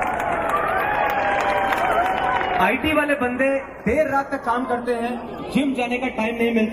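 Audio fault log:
throughout, channels drifting apart. The two channels run on separate clocks, around 70 ppm apart. The delay between them grows steadily, reaching roughly 0.4 ms by the end. Summed to mono, the comb notches sweep slowly downward, heard as a slow flanging.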